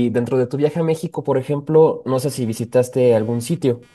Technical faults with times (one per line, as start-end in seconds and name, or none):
2.14-3.94 computer activity noise